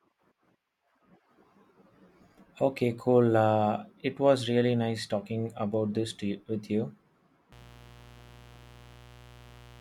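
From 7.52 s to the end of the speech, sharp switching spikes from a dimmer, rectifier or unshielded run enter the signal twice per 60 Hz cycle, producing mains buzz. Harmonics climb into the kilohertz range, heard as a steady, raspy buzz sitting roughly 25 dB below the speech.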